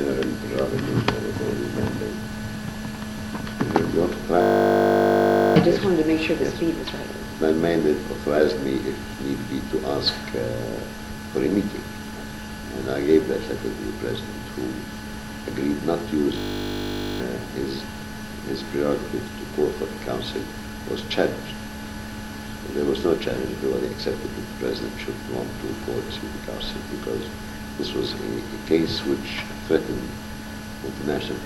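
The audio hits a system hang loop twice, from 4.42 to 5.56 s and from 16.38 to 17.2 s. A 20 ms fragment repeats exactly, making a steady 50 Hz buzz. The system froze while the hardware kept replaying one ring buffer. About a second of sound vanishes the first time and about 0.7 s the second.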